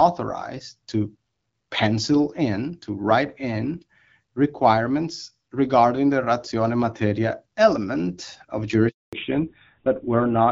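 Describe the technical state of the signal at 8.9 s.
At 8.9 s the signal is inside a handover gap, lasting from 8.89 to 9.13 s. The call switches networks and no speech frames arrive for 240 ms. The speech fades within tens of milliseconds, then stays silent until the new link starts.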